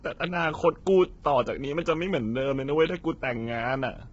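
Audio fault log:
Throughout, low-delay AAC compression: the speech sounds rough and grainy, with a hiss-like noise filling the gaps between the pitch harmonics and nothing at all above 7.7 kHz. The likely cause is AAC-ELD, the low-delay AAC variant used for video calls. Its short frames resolve the harmonic structure poorly and spend bits inefficiently, and the heavy damage here fits a low bitrate around 16 kbps.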